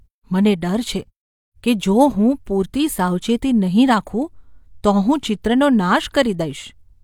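Nothing in this bit of speech gives a listener any technical trouble to point to.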